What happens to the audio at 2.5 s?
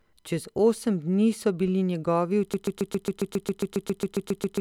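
At 2.54 s the speech locks into a stutter: a 0.14 s fragment repeats exactly, back to back, about 15 times through to the end of the clip, a broken-record loop. The player or stream likely stalled and kept replaying its last fragment, so the following speech is lost.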